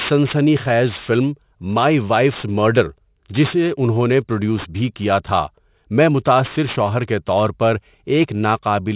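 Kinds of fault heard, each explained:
Aliasing: The rate drop skipped filtering, so content above 4 kHz folds back down. Sibilants turn gritty, with alias products about 20 dB below the speech.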